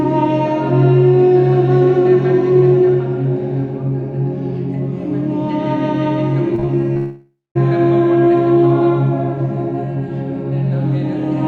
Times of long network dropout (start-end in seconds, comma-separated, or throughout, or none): 6.97-7.57